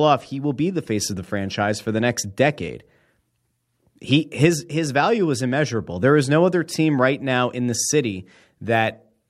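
Nothing stood out as a technical fault on listening to this speech recording.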